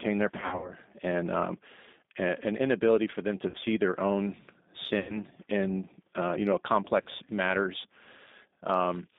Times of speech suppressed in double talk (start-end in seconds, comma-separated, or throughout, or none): none